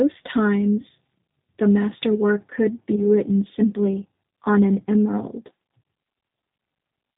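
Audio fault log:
throughout: G.729 codec damage, plainly audible. The speech is rebuilt from a vocal tract filter, a pitch predictor and a few pulses per frame, which fits an 8 kbit/s G.729A coder. Nothing above 4 kHz survives, and the result sounds rough and synthetic.
2.96 to 3.02 s: VoIP packet loss concealed by the speech codec. The gap points to a single lost 10 ms frame. The decoder stretched its last pitch and filter into a brief, fading sound, and the following frames stayed weakened.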